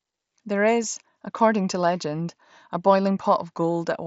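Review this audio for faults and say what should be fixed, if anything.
At 0.83 s, just before "according to legend a", there is a brief concealed Bluetooth headset packet loss. About 7.5 ms of speech went missing, which fits a single lost frame. The receiver filled the gap by repeating recent waveform, through the mSBC headset codec. The patch is nearly inaudible. To prevent it, keep the headset close to the phone and away from Wi-Fi congestion.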